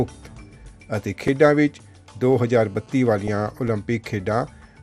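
The whole clip sounds dull, with a gurgling, granular texture in the upper range. That points to MP2 compression, likely at a low rate around 80 kbps. At 1.28 s and 3.68 s the audio drops to digital silence for about 6 ms, short enough to be heard as a tick. Each gap fits a 256-sample block of digital silence, such as a buffer not filled in time. From 2.22 to 3.51 s a steady, raspy GSM phone buzz sits about 32 dB below the sound. It repeats at 217 Hz with many harmonics, as a nearby phone transmits during a call. At 3.27 s, inside that buzz, a brief burst of DAB burbling hits three frames, where a small number of bit errors corrupted the compressed audio data.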